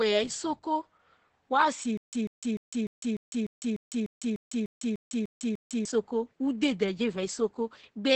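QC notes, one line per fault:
Throughout: Opus voice compression. The SILK coder runs at 10 kbps in wideband, coding the excitation coarsely and leaving nothing above 8.7 kHz, so the speech sounds muffled, hoarse and slightly robotic.
1.97–5.85 s: stutter with silent gaps. The stream likely stalled and replayed its last fragment on each retry: a 145 ms burst repeats 13 times, with 154 ms of digital silence between repeats, and the intervening audio is lost.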